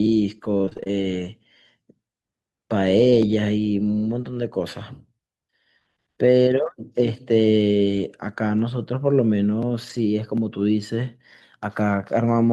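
From about 0.57 s to 10.0 s, the stream suffers scattered short gaps: roughly ten packets arrive late or not at all, spread thinly across the speech, and the receiver covers each hole by stretching out the sound that came just before it. Each patch lasts around 20 ms at most, and together they cover about 2 percent of that span. What you hear are isolated ticks, small smears and brief hiccups dotted through the speech.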